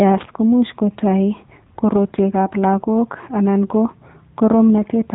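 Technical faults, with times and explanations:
Throughout, AMR narrowband mobile codec: the speech has nothing above 3.8 kHz and carries a plainly audible buzzy, synthetic edge. The codec works at 8 kHz sampling, so the upper band is simply gone. It does not send the waveform. It rebuilds each 20 ms frame from a vocal-tract filter excited by a few pulses. How coarse that rebuild sounds points to one of the lower AMR-NB modes, around 8 kbps.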